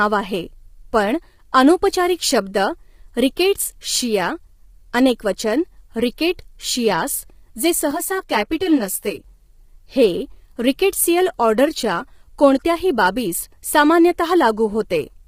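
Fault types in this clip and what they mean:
Low-delay AAC compression: The likely cause is a low-delay AAC-ELD encoder working at a low rate, fitting about 24 kbps, whose short frames resolve pitch harmonics poorly. Throughout the clip the speech sounds rough and grainy, with noise between harmonics and nothing above 15.8 kHz.
Loose connector crackle: A worn or dirty contact briefly made and broke the signal path, chopping the audio on and off. From 3.96 to 4.02 s, a span of 66 ms, this produces a short, irregular burst of scratchy crackle in the speech.
Channel delay (comb filtering): One channel arrived roughly 10 ms late and was summed with the other, so shared content cancelled at evenly spaced frequencies starting near 50 Hz. From 7.91 to 9.24 s the speech turns hollow and phasey with fixed spectral notches.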